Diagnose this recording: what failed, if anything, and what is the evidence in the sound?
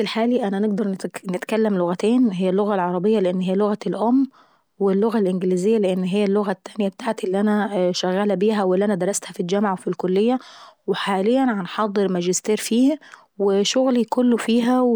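Nothing failed: no stage from capture to playback leaves any audible mark on this speech recording, so there is no fault to diagnose.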